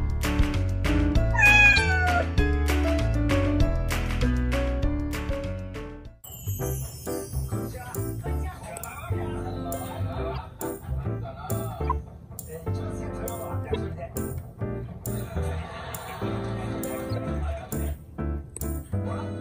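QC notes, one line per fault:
1.72–1.78 s, 6.24–6.26, 10.35–10.38, 11.88–11.92, 13.72–13.76 and 17.16–17.18 s: corrupt frame decoded. Damaged compressed frames were played anyway, putting energy at wrong frequencies. Each is a brief chirp or noise burst, loudest near 1.7 s, faintest near 6.2 s.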